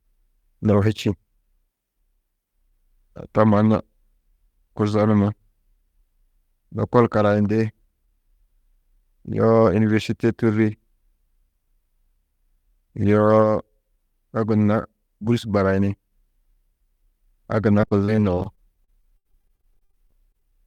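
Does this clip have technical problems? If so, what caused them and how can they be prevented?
Yes. From 17.81 s to 20.58 s the speech turns choppy and robotic from repeated packet loss: about thirty short holes, the longest around 74 ms, with roughly a fifth of that stretch patched by repeating the last sound. On a spectrogram the harmonics smear into flat, stretched bands broken by abrupt edges; the waveform shows repeated identical cycles and sudden joins. A wired connection, a larger jitter buffer and less network congestion would prevent it.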